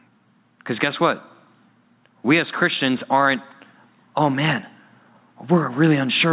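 Gain pumping runs through the whole speech clip, heard over a narrowband call path with nothing above 4 kHz, which fits a G.711 codec. The level swings by around 10 dB, leaving loud and soft passages squashed together. This points to a likely cause of input gain set far too high with a fast limiter clamping it.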